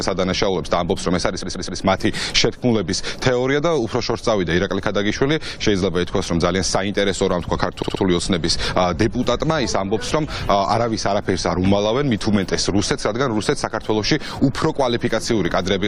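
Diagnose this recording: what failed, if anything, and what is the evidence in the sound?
Repeated frames at the codec or storage stage: a 128 ms chunk replays three extra times at 1.42 to 1.81 s, and a 64 ms chunk likewise at 7.82 to 8.02 s.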